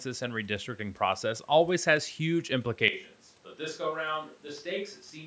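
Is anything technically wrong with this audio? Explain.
Yes. From 2.88 s to the end, the speech turns roomy, hollow and thinner, drops about 10 dB and gains background noise. This is likely a switch to a distant microphone.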